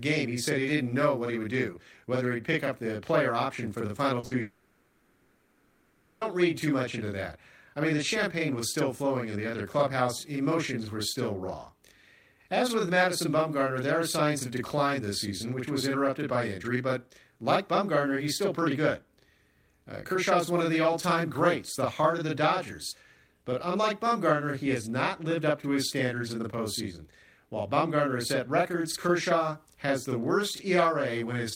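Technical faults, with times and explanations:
Throughout: channel delay (doubling). One channel runs about 40 ms behind the other, and the two are summed to mono. At that spacing the late copy sits just apart from the original. The speech sounds doubled, with a slap following each sound at the same level. The delay is constant, so the doubling never changes across the clip. Every onset carries the same short echo.
4.19 to 4.25 s: short concealed packet loss. About 40 ms of speech never arrived in time. The receiver filled the hole by extending the last sound, following its pitch if voiced or using shaped noise if not. It then blended back into the real audio. The result is a brief smear or wobble. The original 40 ms of speech is gone, replaced by that synthetic stretch.
4.25 to 4.33 s: burst of packet loss. Straight after the first gap, about 60 ms more went missing in a run. Concealment carried on from the last sound and turned it down as the gap lengthened. 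Voiced material becomes a held buzz, and other material becomes a fading hiss. When real audio resumes, it picks up further along, and those 60 ms of speech are simply absent.
4.41 to 6.23 s: long network dropout. For about 1.8 s the original speech is missing. The gap is filled the whole way by a continued buzz or hiss carried on from the last sound, fading as it goes, with no stretch of true silence. The speech then returns further on, without the lost part. The likely cause is a stall in the network stream, following so closely after the two shorter losses.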